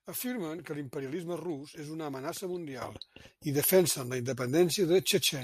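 At 2.82 s, just after "rus és una amenaça", the speech and the background noise jump together by about 10 dB and stay louder to the end, a sudden gain jump. The likely cause is a digital gain change applied between two samples with no ramp. On the waveform the envelope steps up abruptly at that point; on a spectrogram every frequency band, including the noise floor, brightens at once along a sharp vertical edge.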